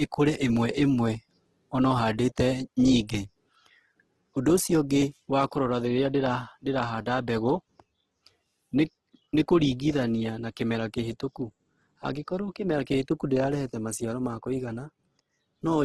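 From start to finish the speech carries heavy damage of the kind Opus compression leaves, most likely from encoding at a very low bitrate, something in the region of 12 kbps. Nothing survives above 12.3 kHz, and inside that band the encoder has kept each band's energy but patched in folded or noise-like content where bits ran short. So rather than swirling, the voice comes across rough, grainy and a bit noisy on its tonal parts throughout.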